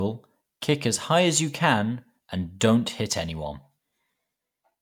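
No technical faults can be heard anywhere in this speech recording. There is nothing here that needs a time or a description.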